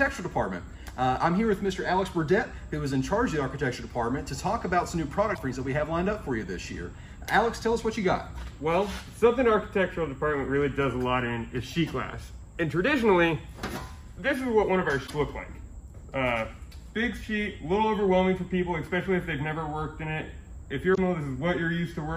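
Three brief bursts of damaged data in a compressed stream occur at 5.32–5.39 s, 15.04–15.11 s and 20.91–20.98 s, each about 70 ms of glitch where corrupted frames desynchronise the decoder.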